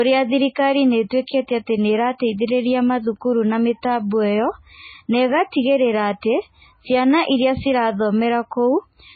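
From start to finish the speech stops dead above 4.6 kHz and carries swirly, smeared coding artefacts, likely low-bitrate audio saved at a high bitrate. Unlike ordinary low-pass filtering, the cut-off comes with artefacts that fit a very low first MP3 encoding.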